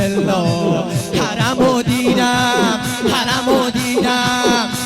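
Nothing stood out as a technical problem on listening to this audio.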